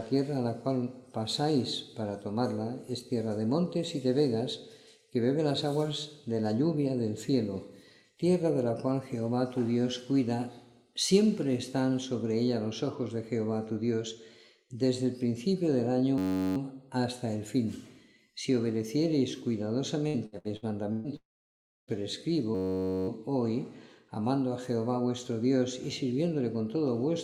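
At 16.18 s the sound locks into a system hang loop until 16.57 s. The machine or driver stalled while the hardware kept replaying the same 10.67 ms chunk, which fits a 512-sample buffer, so you hear a steady buzz at about 93.8 Hz. It resumes with essentially nothing lost.

From 20.08 to 21.07 s there's repeated packet loss. Five separate holes, the longest 120 ms, each get patched by stretching the last bit of sound. About 37% of that second is filler, so it comes out choppy and robotic with chunks missing.

Right after, at 21.16 s, it goes quiet until 21.90 s. There's a brief smeared tail of the last sound, then roughly 0.66 s of silence before the audio picks up again further along, about 0.72 s short. That's likely a long network dropout, with nothing arriving for that stretch.

The system hang loop comes back at 22.55 s and runs to 23.08 s. It's the same 10.67 ms, 512-sample-sized buffer cycling over and over, so the same roughly 94 Hz buzz, just a bit longer this time, and again it skips essentially nothing.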